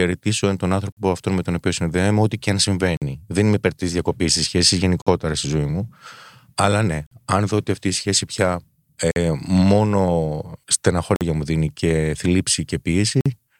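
At 0.92, 2.97, 5.02, 7.07, 9.11, 11.16 and 13.21 seconds, the speech drops out for about 48 ms each time. These are gaps between chunks. The audio arrives in 2-second blocks, and a short stretch of silence sits at every join. No speech is cut away. Each chunk is simply pushed later. The result is a sharp-edged hole that returns at a steady beat, roughly every two seconds.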